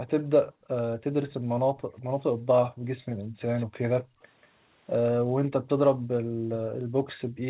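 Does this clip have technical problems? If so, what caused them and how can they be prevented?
Yes. An echo leak puts a faint copy of the speech, trailing by 187 ms, at 0.07–0.54 s and 1.29–2.03 s (about 30 dB down) and at 3.55–4.47 s (about 20 dB down). The likely cause is a loudspeaker at the other end whose echo canceller let part of its microphone pickup through. On a spectrogram each syllable's harmonic pattern reappears fainter and shifted right by about a fifth of a second. A headset, or a lower speaker volume, prevents this.

Background gated by the echo canceller makes the room sound sink while the canceller clamps the microphone. This happens from 0.54 to 3.39 s (about 1.5 s in total, down by up to about 34 dB), at 4.03–4.2 s (about 23 dB), and from 5.13 s to the end (up to about 40 dB). In the waveform the noise floor flattens toward silence, and in the spectrogram the background turns dark in those stretches. 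Cutting echo at the source lets the canceller suppress more gently, and adding comfort noise prevents the dropouts.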